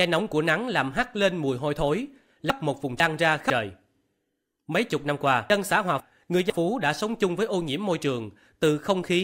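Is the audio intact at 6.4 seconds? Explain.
No. From 5.5 to 6.5 s, chunks play out of order. One 500 ms speech chunk arrives late, after its successor, so the speech sounds jumbled.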